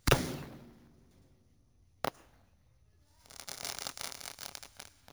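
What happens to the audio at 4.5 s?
At 4.5 s the audio carries imaging from sample-and-hold upsampling, present for the whole clip rather than starting there. The sound was raised from 16 kHz to 44.1 kHz by repeating each sample without a smoothing filter, so a mirrored copy of the spectrum sits between 8 and 16 kHz at about 13 dB below the signal. It is heard as a bright metallic fizz that rises and falls with the sound. On a spectrogram the content above 8 kHz appears flipped downward from 16 kHz; the waveform shows small staircase steps.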